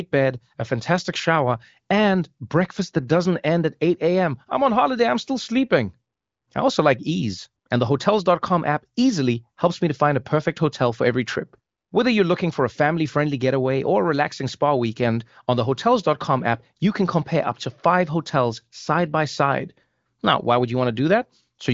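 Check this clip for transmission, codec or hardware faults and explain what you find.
No transmission, codec or hardware faults are audible here.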